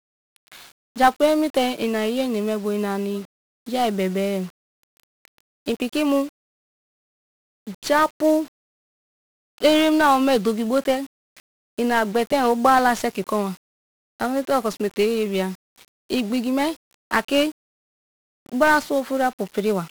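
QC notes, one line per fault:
Throughout: 1-bit DFPWM compression, heavy. Each sample keeps a single bit that nudges a running level up or down, so the speech turns fuzzy and crackly, treble drowned in hiss; the spectrogram shows a dense broadband noise floor smearing over formants, and the waveform looks grainy, stair-stepped.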